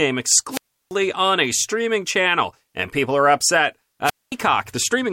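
At 0.50 s the radio link from an analogue FM wireless microphone fades so far that the receiver's squelch shuts the output, a wireless microphone squelch dropout lasting to 0.93 s. A rise of hiss gives way to a hole of near silence of about 338 ms before the speech returns. The same failure recurs from 4.04 to 4.32 s, with a shorter mute of about 223 ms between the static and the speech coming back.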